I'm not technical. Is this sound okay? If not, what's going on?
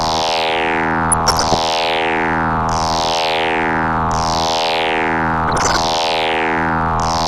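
No. The whole clip sounds dull and muffled, with the top end missing and a clearly audible gurgling, grainy texture sitting on everything. That is most likely MP2 compression, the older squeezing method used for digital radio. It splits the sound into narrow slices and, when there isn't enough data to go round, switches off the highest slices and handles the rest roughly, which is why the brightness vanishes and a bubbly roughness appears.

Twice the sound briefly breaks up with bubbly, blipping noise: from about 1.10 to 1.54 seconds, and again from about 5.48 to 5.89 seconds. This is DAB burbling, which happens when weak radio reception lets a small share of the data arrive garbled. Short blips of noise then pop up in individual slices of the sound, giving that wet, splattery noise before things settle again.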